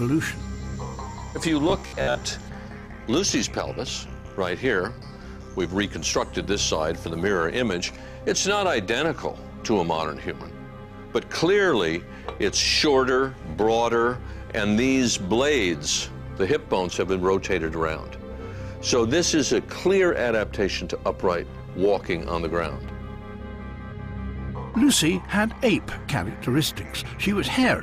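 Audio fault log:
1.70 to 2.22 s, robotic sound from repeated short buffers: for about half a second the sound turns into a rigid, metallic buzz pitched at about 66.7 Hz, which still loosely follows the shape of the audio underneath. The likely cause is fresh audio arriving too seldom, so the playback filled the gaps by looping a 15 ms slice over and over while about half of the real material was skipped, and that fixed loop length sets the buzz frequency.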